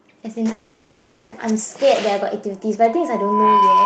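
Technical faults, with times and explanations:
0.51–1.35 s, call audio freeze: the last sound stretches into a fading buzz for about 0.84 s, never dropping to silence, then the audio resumes where it stopped with nothing lost. This likely came from delayed packets draining the jitter buffer, so the gap became added delay.
2.88–3.85 s, loudspeaker feedback squeal: a single 1 kHz tone swells over roughly 0.7 s into a howl about 10 dB above the signal and holds to the end. The microphone is picking up its own loudspeaker, and loop gain above one at that frequency lets it build.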